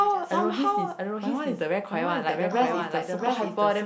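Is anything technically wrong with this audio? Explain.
Yes, there is a doubled audio track throughout this speech clip. A second full-band copy, a few dB quieter, trails by about 0.7 s without any decay, likely from a slower capture path, and the waveform and spectrogram show every feature repeated at that offset.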